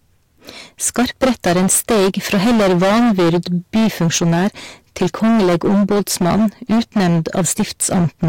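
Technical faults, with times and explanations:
Throughout, hard clipping: every loud syllable carries a harsh, buzzing fuzz. The speech was driven about 17 dB past what the stage could pass, so nearly a third of the waveform is sliced flat at the limit, and those squared-off peaks spray harmonics high into the spectrum.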